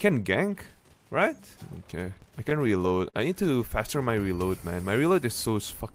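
From 2.49 to 3.15 s, repeated stalls (stutter): late packets emptied the jitter buffer six times, each gap filled by continuing the previous sound, producing a dragging stutter. Spectrogram shows brief smeared, repeated frames.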